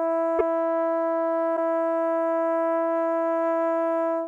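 Broken MP3 bit reservoir at 0.38 s and 1.56 s: music jumps ahead with a 30 ms glitch, likely dropped frames leaving the next decoding another frame's bytes.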